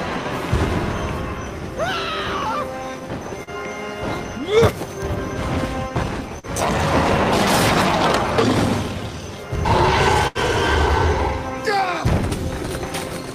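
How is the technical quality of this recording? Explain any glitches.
The recording has three dropouts where audio failed to arrive in time, two brief and one longer.

Short concealed packet loss at 3.43 to 3.50 s and 6.39 to 6.46 s: each time about 40 ms of audio never reached the decoder, and the receiver extended the preceding sound for roughly 35 to 43 ms before blending back. Each gap sounds like a quick smear or wobble.

A burst of packet loss at 10.27 to 10.38 s: about 80 ms went missing, and the receiver continued the last sound for around 77 ms while fading it down. It comes across as a held buzz or fading hiss, and the audio resumes further on with that stretch gone.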